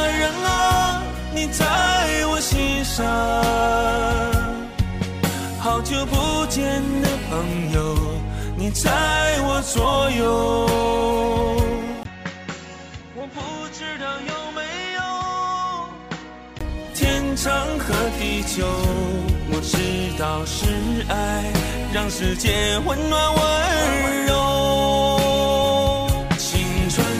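At 12.03 s there's a brief gap of about 20 ms, and then the sound drops noticeably in level and goes duller, with nothing above 7.6 kHz and a faint new noise floor sitting well under the signal. That points to the input switched to a poorer device, likely a narrower-band mic or headset profile taking over. It holds until 16.61 s, when the fuller sound comes back.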